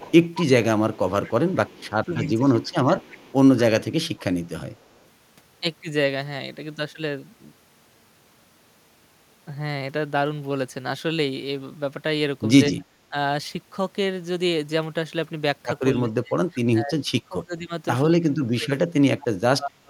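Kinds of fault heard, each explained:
Echo leak: A delayed copy of the speech, trailing by a steady 223 ms, runs from 0.0 to 1.92 s at about 20 dB below the main level. It returns from 2.61 to 3.62 s at about 25 dB down, faintly at 4.79 to 4.97 s near 40 dB down, and as a short scrap at 19.21 s. The fixed delay points to a loudspeaker-to-microphone path whose echo canceller likely left part of the pickup uncancelled and sent it back.
Speech suppressed in double talk: The talker's level sinks in pieces whenever both sides overlap. From 2.06 to 2.97 s the dips reach roughly 10 dB across about half a second, from 12.78 to 13.14 s they reach roughly 20 dB, and from 15.92 s to the end they go as deep as roughly 30 dB over about 3 s in total. The likely cause is an echo canceller that could not separate the local talker from loudspeaker echo and attenuated both.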